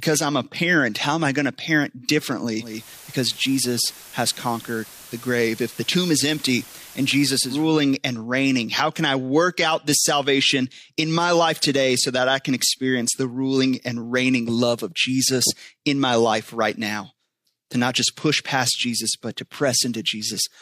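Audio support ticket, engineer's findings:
Digital radio blending to analogue, 2.56 to 7.74 s, after "I going to parent", returning before "and reigning how can". Speech cross-fades over about 330 ms to the FM broadcast. Hiss rises to roughly 20 dB below the signal, with a level drop of about 1 dB. Probable component: the hybrid receiver's blend logic. The digital stream was lost, the tuner fell back to FM, and it switched back once digital reception recovered.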